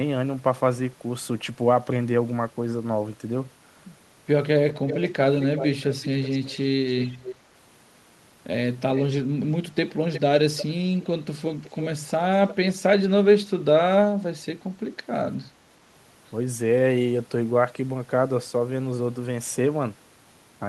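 Between 4.69 and 12.55 s, an echo leak returns delayed copies of the speech at 4.69, 5.35, 7.03, 8.95, 9.89, 10.57, 11.48 and 12.48 s, about 10 to 15 dB below the speech. The delay is a fixed 376 ms, then 360 ms from 9.89 s. This steady lag sets it apart from room reverberation, which smears continuously. The likely cause is a far-end loudspeaker whose echo canceller let some of its microphone pickup back into the call.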